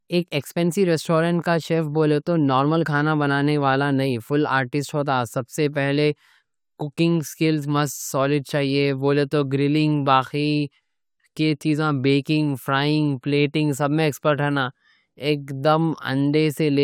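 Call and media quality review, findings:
No technical faults found in the speech signal: levels, continuity and timing hold steady throughout, with nothing pointing to a problem in capture, transport or playback.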